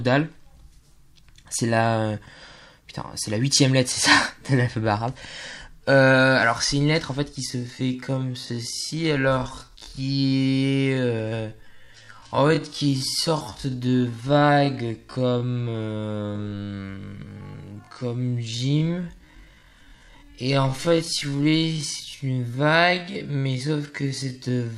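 A time-stretched section runs from 7.45 s to the end: the sound slows to about 0.55x pace, likely from repeated short pieces, giving dragging audio at unchanged pitch.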